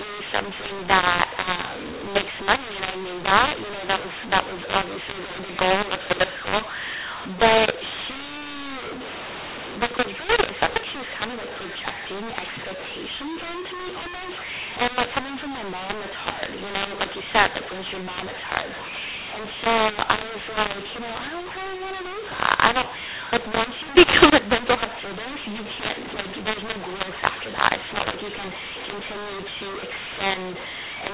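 Speech over a G.711 telephone path, with the band cut off at 4 kHz as the 8 kHz format requires, and a mu-law and A-law mix-up running through the whole clip. The audio was companded with mu-law but expanded with the A-law curve, so each 8-bit code maps to the wrong amplitude. Some levels come out inflated and others shrunken, which gives the speech a harsh, distorted edge. Near-silent samples are pushed well above zero, so the pauses fill with noise instead of going quiet.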